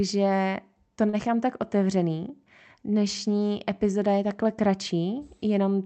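At 1.09 to 1.16 s the speech hits a short stall from a late packet. The next packet missed its playout time, the jitter buffer ran dry, and the receiver held the last sound for about 38 ms until the data arrived, then resumed where it left off. Nothing is lost, but one sound drags slightly with a slight buzz or dip, and everything after plays about 38 ms later. The call codec cuts off the band near 8 kHz throughout.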